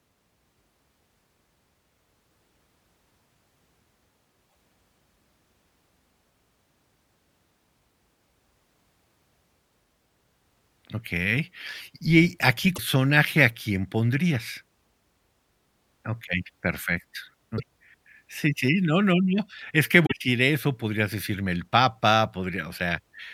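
Damaged data in a compressed stream produces brief disruptions at 4.46–4.54, 12.74–12.79, 17.54–17.60 and 20.02–20.12 s. In each, the decoder misreads corrupt frames and resyncs, which sets these apart from clean dropouts.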